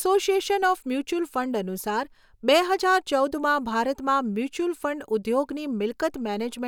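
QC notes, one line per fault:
Nothing to flag here, the speech comes through fine with no problems worth noting.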